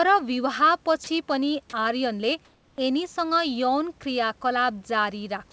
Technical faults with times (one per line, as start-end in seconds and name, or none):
1.04-1.07 sound dropped by the voice detector
2.45-2.78 comfort noise in place of the background
5.51 sound dropped by the voice detector